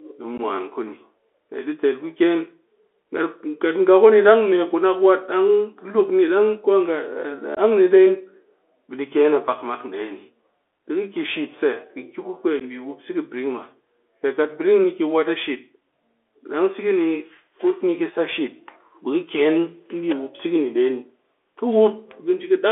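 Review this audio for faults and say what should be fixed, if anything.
The whole recording has gone through the Bluetooth CVSD headset codec, and it's plainly audible. The band stops at about 3.5 kHz with a floor near 300 Hz, so everything sounds boxed-in and telephone-like. The one-bit-per-sample up/down coding leaves a grainy hiss under the speech and scratchy s sounds, which fits a 64 kbps CVSD link. To prevent it, record over a wideband path such as mSBC/HFP wideband, LE Audio, or a wired mic.

There are also three short holes from unconcealed Bluetooth headset packet loss, at about 0.38 s, 7.55 s and 12.60 s. They last about 15 ms, 19 ms and 11 ms, and the last one lands right before "bi wup". Each is a few lost voice packets replaced by silence or an idle pattern, so the audio drops out with hard edges. To prevent it, keep the headset close with a clear line to the phone, or use a link with packet-loss concealment.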